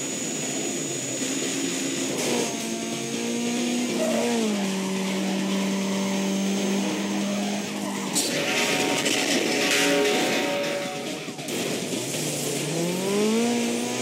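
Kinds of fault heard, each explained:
No faults can be heard anywhere in the signal.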